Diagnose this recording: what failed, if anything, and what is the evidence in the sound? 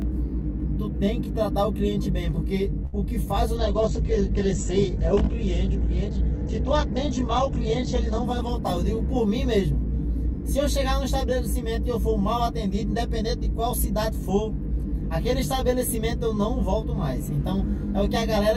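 Throughout the recording, one channel runs about 20 ms late relative to the other before the two are folded to mono. This is a channel delay with comb filtering, introduced at the mixdown or wiring stage. Whatever both channels share cancels at evenly spaced frequencies, starting near 30 Hz. The result is a fixed set of notches across the spectrum, and the sound is rough or slightly doubled from start to finish.

At 2.85 s, a network packet arrived late and the jitter buffer ran dry, causing a short stall. The receiver filled the gap by stretching the last sound for 75 ms until the packet arrived, then resumed from the same point. Nothing is lost. One sound is held unnaturally long, ending at 2.95 s, and the playout delay grows by 75 ms.

From 3.57 s to 11.77 s, there is a call bitrate drop. The bandwidth estimate collapsed and the encoder fell from 128 kbps to 10 kbps, staying at the bottom for about 4.4 s. 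At that rate the codec also narrows the audio band from 20 kHz to 8 kHz. The sound turns muffled, rough and watery, losing its top end, until the rate recovers.

Between 8.59 s and 10.60 s, the jitter buffer held more audio than its target, so the receiver performed a jitter buffer speed-up to reduce the delay. It trimmed short pitch-period pieces repeatedly, removing roughly 40 ms in total. Playback runs about 2% fast at unchanged pitch. This overlaps the low-bitrate section.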